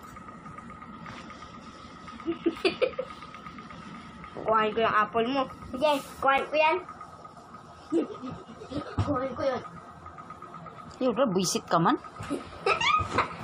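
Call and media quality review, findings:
Gap between stream segments at 6.38 s: brief hard-edged dropout, about 7 ms of silence inserted. Probable component: segmenter/player timestamp handling. Adjacent segment timestamps don't abut; player fills the hole with silence. Fits 4 s segments. No audio lost.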